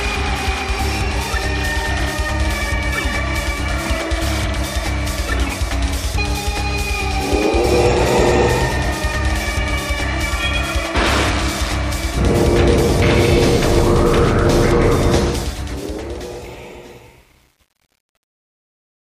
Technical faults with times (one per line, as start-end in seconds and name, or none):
15.30-19.11 truncation distortion on a fade